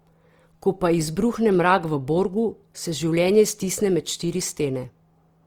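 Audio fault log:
throughout, Opus compression: the speech sounds plainly grainy and rough, its tones noisy rather than swirly, with content still reaching 20.3 kHz. This is likely Opus music mode refilling starved bands with folded or noise-like energy, which fits a rate near 24 kbps.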